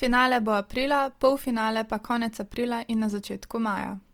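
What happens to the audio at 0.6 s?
At 0.6 s the speech is passing through what is likely Opus compression, which runs across the whole clip. The rate sounds like roughly 24 kbps in the music (CELT) mode. With that few bits, the encoder keeps each band's energy but fills the detail with folded copies of lower bands or with noise. The speech sounds plainly grainy, rough and noisy rather than swirly. Bandwidth stays full, reaching about 20.2 kHz.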